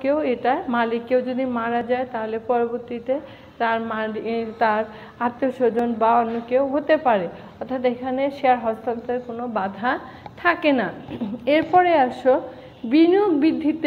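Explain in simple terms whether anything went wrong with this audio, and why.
Two tiny skips where the sound jumps forward occur at 1.81 s and 5.79 s. This is overlap between stream segments: the audio arrives in 4-second pieces whose timings overlap slightly, so the player trims about 10 milliseconds of real sound at these two joins.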